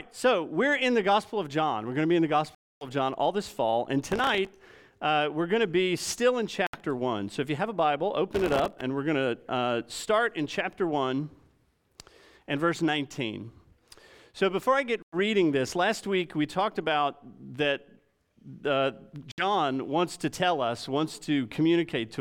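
The audio drops out cleanly four times, at 2.55 to 2.87 s (263 ms of silence), 6.67 to 6.78 s (68 ms), 15.02 to 15.16 s (101 ms) and 19.32 to 19.44 s (63 ms), then resumes. These are likely Bluetooth stalls, where the headphone buffer empties while delayed packets are resent. Each shows as a flat waveform and a blank vertical band on a spectrogram. From 4.11 to 4.72 s and again from 8.35 to 8.81 s, processor overload crackle adds a gritty tearing. Buffers of only a millisecond or two miss their deadlines about 20 and about 50 times and replay stale audio. The waveform shows jagged discontinuities, and the spectrogram shows dense broadband vertical streaks.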